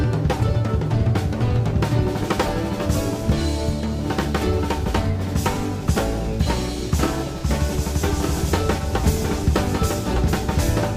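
From 8.23 s to the end, a doubled audio track: a dry, full-band copy about 5 dB quieter trails by roughly one second, likely from a second capture path, showing as repeated, offset spectrogram patterns that begin abruptly.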